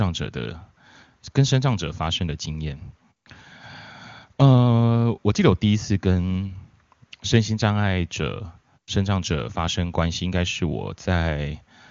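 No technical faults are audible.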